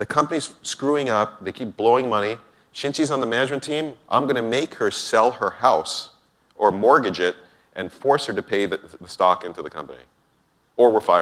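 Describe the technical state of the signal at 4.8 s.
At 4.8 s the signal is intact, with no audible fault at that moment.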